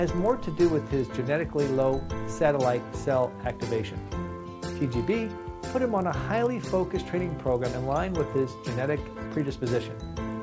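From start to finish, a steady buzz rides under the sound at 50 Hz. This is a resampler restarted on every block. The converter processed each 20 ms block on its own. At each block edge it lacked the real neighbouring samples, so it used silence or the block's far end instead. That leaves a small error at every edge. The blocks are short, so the ticks fuse into a buzz. It appears only while signal is present. The pattern fits a conversion from 24 kHz to 16 kHz.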